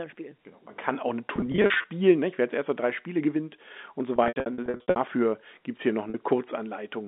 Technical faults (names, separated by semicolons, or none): packet loss with pitch repetition